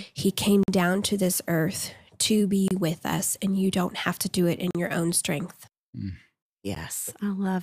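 Adjacent stream segments leave a gap between their time stamps, and the player fills each hole with silence: a gap between stream segments. The speech drops out with hard edges, without losing any audio, at 0.63 to 0.68 s, between "he came" and "down to this earth", at 2.68 to 2.71 s after "to this earth to", at 4.71 to 4.75 s before "your own strength", and briefly at 6.75 s. The regular two-second spacing suggests 2-second segments.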